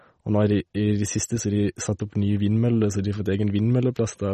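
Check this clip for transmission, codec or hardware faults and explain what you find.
One codec fault runs through the whole speech clip. The sound is plainly watery and swirly, with metallic chirps on the s sounds and smeared onsets, and nothing above 13 kHz. The likely cause is MP3 compression at a low bitrate, fitting roughly 32 kbps. Starved of bits, the encoder drops the treble and lets weak frequency components flicker in and out from frame to frame.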